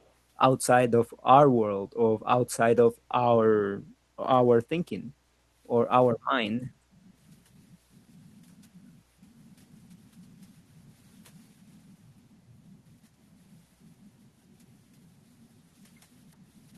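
At 0.03 to 0.08 s there is an echo leak, likely from a far-end echo canceller that failed to remove all of its loudspeaker's sound from its microphone. A faint copy of the speech returns about 368 ms late, very quiet, roughly 40 dB below the voice.

At 6.78 to 6.89 s the background is gated by the echo canceller: it pulled the microphone down while the loudspeaker played, so the room sound dips by about 12 dB for roughly a tenth of a second, then returns.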